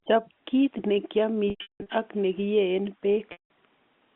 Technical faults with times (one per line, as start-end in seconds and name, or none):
1.50-1.86 packet loss with pitch repetition
3.32-3.50 packet loss with pitch repetition